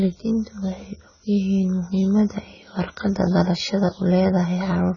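The speech sounds dull and smeared throughout, with fizzy, warbling sibilants and nothing above 7 kHz, likely heavy AAC compression pointing to a bitrate near 16 kbps.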